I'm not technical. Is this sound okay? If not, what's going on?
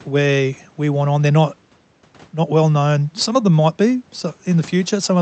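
Yes, this speech sounds fine; nothing here needs fixing.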